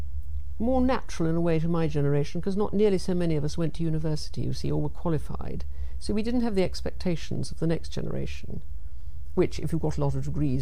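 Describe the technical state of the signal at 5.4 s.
At 5.4 s the signal is intact, with no technical fault present at that moment.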